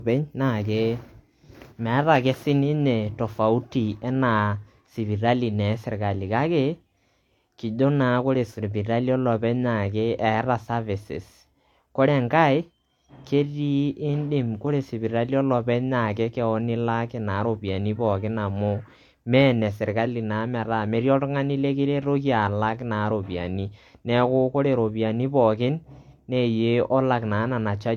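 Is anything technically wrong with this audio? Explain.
Yes. Throughout, the speech was likely passed through transcoding between lossy codecs, which fits low-rate HE-AAC then MP3. Both codecs' artefacts layer together, with nothing above 18.5 kHz.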